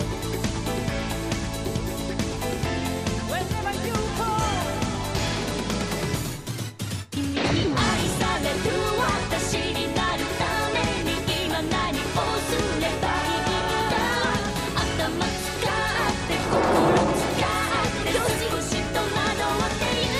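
No technical faults can be heard anywhere in this audio. Nothing in it calls for attention or repair.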